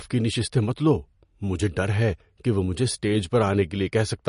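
From start to finish the speech sounds watery and swirly, with chirpy, smeared s sounds, likely from MP3 compression at a low bitrate near 40 kbps. A spectrogram shows a flat ceiling at 10.6 kHz and weak bands flickering on and off.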